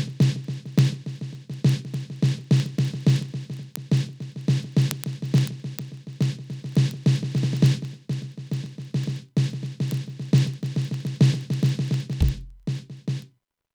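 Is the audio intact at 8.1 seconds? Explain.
No. At 8.1 seconds the music is overlaid with word clock ticks, which run from 0.10 s to 13.72 s. The receiving device runs on its own clock, not locked to the sender's. The two differ by roughly 700 parts per million. Each time they slip past each other, one sample is dropped or repeated. This gives a sharp tick about every 30 ms, a steady rattle of around 400 clicks across the clip.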